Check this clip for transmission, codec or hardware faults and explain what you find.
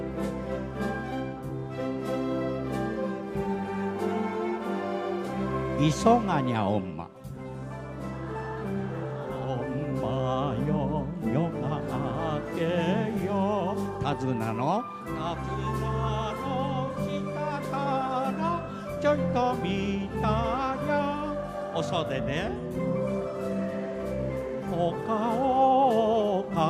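No transmission, codec or hardware faults.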